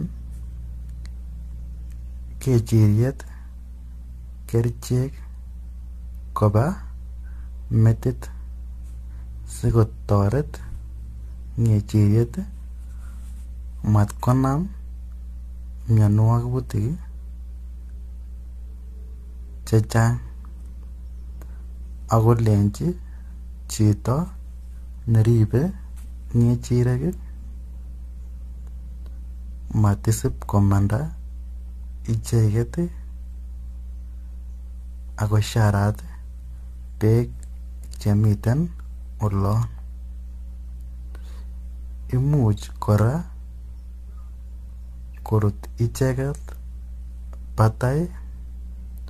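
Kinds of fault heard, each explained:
Mains hum: throughout the clip, a steady 60 Hz tone with some low harmonics sits under the speech, only about 15 dB below it, so it stays audible even while someone is talking and is obvious in the gaps. It comes from power-line current leaking into the signal path, for example through a ground loop or stray field from a nearby transformer, and it stays constant in pitch and level regardless of the speech.
Generation loss: throughout the clip, the speech sounds swirly, hollow and smeared, consonant onsets are blurred, and nothing is present above 14.1 kHz, which fits an AAC encode at around 64 kbit/s. The damage is heavier than one pass at that rate would explain, likely because the audio was decoded and re-encoded about four times. Each pass quantises again on a shifted frame grid, so noise and spectral gaps accumulate.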